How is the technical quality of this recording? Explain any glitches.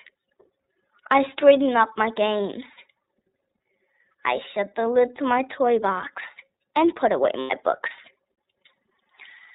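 The technical quality is limited. The whole recording sounds muffled, narrowband and a little rough and synthetic, and there is one brief glitch.

From start to finish, nothing above 4 kHz comes through and the speech has a coarse, synthetic texture. This is the iLBC codec, a narrowband VoIP coder whose damage here fits its 13.33 kbps, 30 ms frame mode.

From 7.40 to 7.51 s, just after "box and put away", the sound briefly turns into a held, buzzy vowel. These are lost iLBC frames, which fits three missing 30 ms frames. The decoder filled the gap by repeating the last pitch cycle mixed with noise, and the speech recovers almost immediately afterwards.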